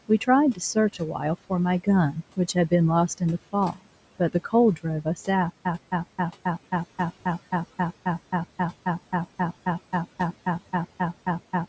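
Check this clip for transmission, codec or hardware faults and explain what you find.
Three faults are audible: noise suppressor artifacts throughout, a brief stretch of speech cut by the noise suppressor, and a stutter with silent gaps that runs to the end.

Noise suppressor artifacts run through the whole clip. The suppressor pulls down whatever bands it judges to be steady noise, by about 18 dB here, so the room noise sinks in the pauses and comes back up under the speech. On a spectrogram, the noise floor looks patchy and blotchy rather than even, with isolated time-frequency speckles between phrases. The waveform shows quiet pauses that are not fully flat.

Speech cut by the noise suppressor occurs between 3.72 and 3.87 s. Here the suppressor mistook part of the speech for noise and dropped it along with the background, by up to about 18 dB. About a tenth of a second of soft speech sounds swallowed and faint. 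On a spectrogram, the upper bands thin out abruptly over that span. On the waveform, the envelope shows a short dip where the speech level should hold.

A stutter with silent gaps begins at 5.50 s and continues to the end of the clip. A 113 ms fragment plays, then about 154 ms of dead digital silence follows, and the cycle repeats every 267 ms, 23 times. The likely cause is a stalled player or stream that replays its last buffer on each retry and then runs dry, so the audio meant for that stretch is lost. The waveform shows identical blocks separated by flat silent lines. The spectrogram shows the same vertical slice stamped repeatedly, with black gaps between.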